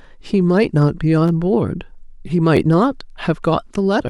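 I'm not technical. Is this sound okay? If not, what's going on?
No. Twice, new audio didn't reach the playback device in time, so it played the previous tiny chunk of speech again. This is a repeated buffer. Each chunk is only about 12 ms long. From 1.28 to 1.30 s the same chunk plays three times in a row, and at 2.57 s one chunk plays twice. Because the pieces are so short, each repeat sounds like a quick click or brief buzz rather than an obvious stutter. Nothing seems to be missing from the speech.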